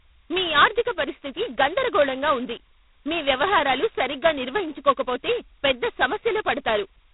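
A harsh, rasping hiss rides on the speech from start to finish, swelling on louder syllables and easing in quieter moments. The top end is also gone, with nothing above about 3.8 kHz. This is G.726 ADPCM coding at a very low rate: each sample carries only a couple of bits describing its difference from a predicted value, so the quantisation error is large and tracks the signal level. The heavy damage fits the 16 kbit/s mode.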